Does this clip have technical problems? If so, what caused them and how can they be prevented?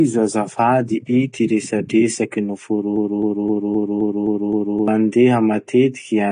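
Yes. Across the whole speech clip, nothing comes through above 9.6 kHz, and codec damage is plainly audible as a dull, smeared sound. The likely cause is AAC compression, AAC-LC at a low rate that fits around 32 kbps. It narrows the band and thins the spectrum to fit. Encoding at a higher bitrate would prevent it.

Right after "azafady ity resadresaky", from 2.96 to 4.88 s, a 260 ms fragment plays back to back seven times. That's a broken-record loop, likely from a stalled player, encoder or stream resending its last buffer, so whatever belonged there is gone. More buffering and stall detection would prevent it.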